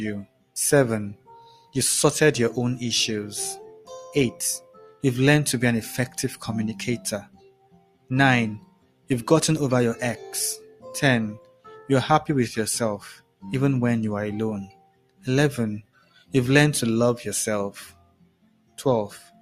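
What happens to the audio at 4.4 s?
At 4.4 s the sound is being cut by the noise suppressor, in a stretch running from 3.68 to 5.04 s. The suppressor misreads the sustained parts of the sound as noise and pulls them down, reaching a drop of about 16 dB at its deepest. Across roughly 0.7 s of that window, held material sinks and decays are cut short, while sharper onsets mostly survive, so the passage sounds hollowed out and abruptly truncated.

This dip sits on top of a broader problem: a noise suppressor applied to music or sounds, active through the whole clip. Built for speech, it treats steady tones, ambience and reverb tails as unwanted noise, and its gain swings by around 15 dB as the content changes. Attacks pass, but sustains and tails keep sinking, which gives the audio a pumping, fluttering, thinned character.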